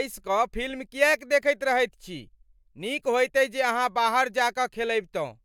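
Nothing technical stands out in this short bit of speech, so there's no fault to point to here.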